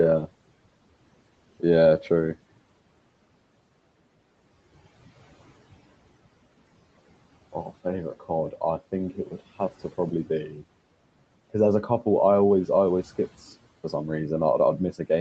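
At about 10.49 s the speech gets caught by the noise suppressor, and it lasts until roughly 10.62 s. The suppressor seems to mistake a soft stretch of speech for the room noise sitting about 23 dB below it, so it ducks that bit along with the background, by about 6 dB at its deepest and for something like a tenth of a second in all. You hear a sound briefly go faint and slightly swallowed.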